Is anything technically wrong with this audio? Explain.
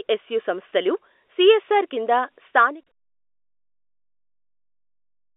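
No, nothing technically wrong stood out on listening to this speech.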